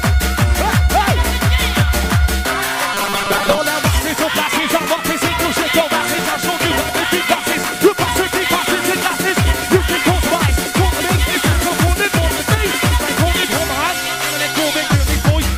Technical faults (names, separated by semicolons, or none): robotic sound from repeated short buffers